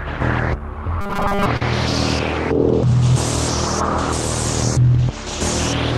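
From 1.01 to 1.46 s, new audio likely arrived too seldom, so the receiver kept replaying a very short buffer, most of the time, while real audio was skipped. The result is robotic sound from repeated short buffers: a rigid, metallic 200 Hz buzz, which fits a 5 ms repeat.

At 1.57 to 1.62 s comes a short stall from a late packet. A packet missed its slot, the jitter buffer ran dry, and the receiver stretched the last sound for 41 ms before resuming where it left off. Nothing is lost, but that moment is held too long and the timing slips 41 ms later.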